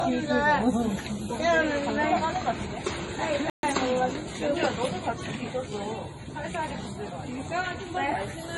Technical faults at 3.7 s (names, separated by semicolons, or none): MP3 compression; playback stall; time-compressed catch-up